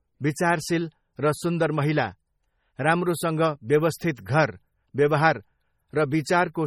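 From start to finish the speech carries heavy MP3 compression damage, likely from encoding at a very low bitrate, which fits roughly 32 kbps. Quiet frequency detail flickers in and out between frames, giving a watery, swirling texture, with metallic chirps on s sounds and softened, smeared consonant onsets. On a spectrogram the upper bands look patchy and speckled, with isolated blocks of energy appearing and vanishing, and nothing at all above 19.9 kHz.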